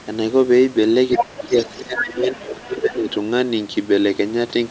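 From 1.12 to 2.09 s a second voice comes through underneath the speech, nearly as loud as the talker. This is the other side's voice leaking through. The talker's device was likely playing the far end on its loudspeaker, and the echo canceller failed to strip that sound from the microphone signal. Two fainter scraps of the same leak follow, a brief one at 2.32 to 2.37 s and another at 2.75 to 2.96 s. Both sit well below the talker.

Overlapping this, from 1.16 to 3.08 s, the talker's own speech dips and breaks up in pieces, for around a second and a half in total. At its deepest the level falls by about 20 dB. This is speech suppressed in double talk. With both sides talking at once, the echo canceller could likely not tell the local voice from the loudspeaker echo, so it turned everything down, and the talker lost level along with the echo. The call's microphone processing, which carries nothing above 8 kHz, is not part of either fault.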